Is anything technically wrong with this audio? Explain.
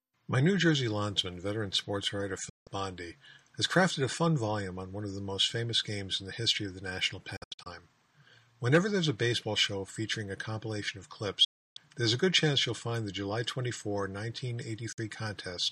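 Yes, there's a digital broadcast dropout, four times: 2.49–2.67 s, 7.36–7.67 s as several short holes, 11.44–11.77 s, and 14.92–14.99 s. Each time the receiver loses good frames and mutes with a quick 8 ms fade, so the sound simply vanishes and whatever was sent is gone.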